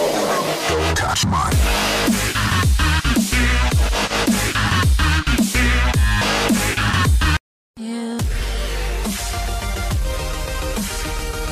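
No technical faults can be heard anywhere in the audio. Nothing in the sound points to a problem with how it was captured, processed or played back.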